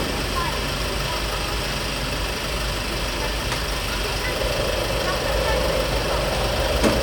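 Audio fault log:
No technical faults can be heard in this recording of everyday sounds.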